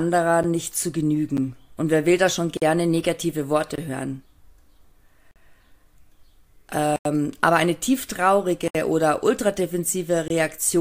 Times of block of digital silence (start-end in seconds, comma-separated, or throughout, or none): 0.43, 1.37, 2.57-2.62, 3.76-3.78, 5.31-5.36, 6.96-7.05, 8.68-8.75, 10.28-10.30